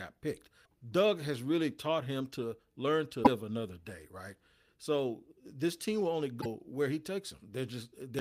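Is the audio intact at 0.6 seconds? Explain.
No. Damaged data in the compressed stream hits from 0.62 to 0.68 s. The decoder misreads corrupted frames, loses sync and produces a brief chirp, squawk, click or short hole.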